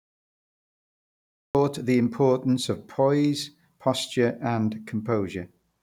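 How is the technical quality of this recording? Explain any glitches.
The recording has one clear technical problem, a cut-off start. From 0.0 to 1.55 s there is only digital silence, and then speech begins abruptly at 1.55 s, already mid-sound with no natural onset or fade-in. Capture or streaming evidently started late, so the opening of the utterance was never recorded and the silence was left in its place. Unlike a dropout, the gap sits at the very start and the audio never resumes something that was already playing.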